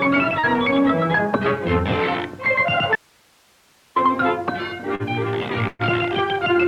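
The audio has two short concealed packet losses, at 0.39 to 0.46 s and at 4.95 to 5.02 s. Each drops about 40 ms of audio. The receiver filled each hole, with 38 ms and 42 ms of sound, by extending what came before and then rejoining the real signal. Each is heard as a brief smear or wobble. From 2.96 to 3.96 s there is an audio dropout to a faint residue. The signal cuts out abruptly for about 1.0 s, and only hiss remains, far below the normal level. The likely cause is a break in the wanted signal while the path after it stayed live. At 5.67 to 5.82 s a burst of packet loss removes 120 ms. The receiver carried the last sound on for 117 ms, fading it down. A 10 ms silence follows before the audio resumes further on.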